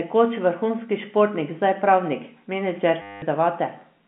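A speech recording carried over telephone-band G.711 coding, with the line's narrow 150 Hz to 3.4 kHz range audible throughout, breaks up from 3.02 to 3.22 s through packet loss with the last packet repeated. For 200 ms the receiver keeps replaying the same short slice, which points to 10 ms packets, so the sound freezes into a robotic buzz near 100 Hz. A plain dropout would go silent, and interpolation would smear. This stutter is a repeat.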